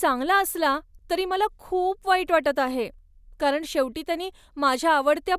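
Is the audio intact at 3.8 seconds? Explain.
Yes, at 3.8 seconds the speech plays through intact, with no audible fault at that moment.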